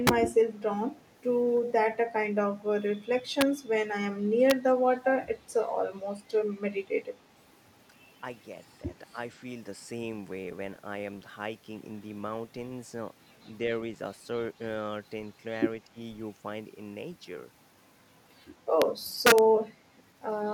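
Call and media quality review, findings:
Integer overflow. Sharp cracks at 0.07, 3.41, 4.50 and 18.82 s, plus 19.26–19.38 s. Loud peaks overran the integer range by about 8, 1, 1 and 3 dB, and the last single crack sat right at the limit. The gain or summing stage wrapped them to the opposite sign instead of limiting them. Harsher than clipping.

Echo leak. A delayed copy of the audio trails it by 185 ms at 0.99–1.19 s, very faint, and at 1.66–1.72 s, only about 10 dB down. Far-end echo canceller likely passed residual loudspeaker pickup back into the call.

Speech suppressed in double talk. Level dips at 9.11–9.17 s, about 10 dB over roughly 70 ms, and at 15.86–15.99 s, about 25 dB over roughly 150 ms, nearly a dropout. Echo canceller likely mistook near-end talk for echo during overlap and attenuated both.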